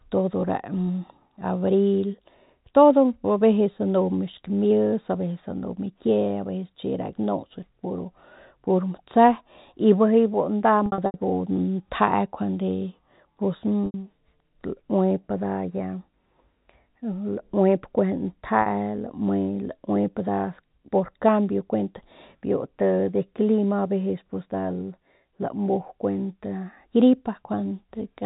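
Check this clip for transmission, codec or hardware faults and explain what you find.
Three short stretches of packet loss with pitch repetition break up the speech, heard over a G.711 telephone channel that passes nothing above 4 kHz.

At 10.86 to 11.14 s, about 180 ms goes missing in scattered gaps, the longest 80 ms. Single 80 ms and 40 ms gaps follow at 13.86 s and 18.62 s. The receiver fills each gap by looping the last pitch cycle, so the sound holds briefly as a buzzy, frozen tone, fading to silence over about 50 ms in the longer gaps before the speech cross-fades back in. That sustained buzz is what separates it from a plain dropout.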